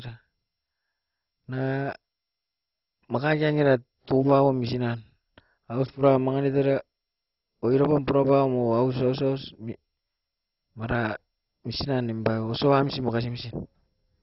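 Throughout, the speech is dull with nothing above 5.6 kHz and a gurgling, granular texture, likely heavy MP2 compression at a very low bitrate, about 32 kbps, dropping upper sub-bands.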